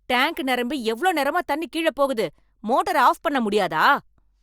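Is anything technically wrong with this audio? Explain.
No, nothing technically wrong can be heard in this speech recording. The audio runs without any audible fault.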